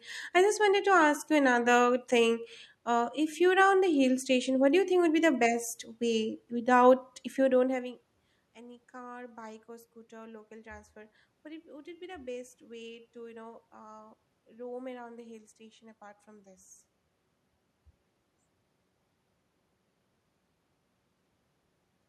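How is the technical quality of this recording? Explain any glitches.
No system faults are audible; the background room noise and the level change at about seven and a half seconds, where the talker shifts relative to the microphone, belong to the recording itself.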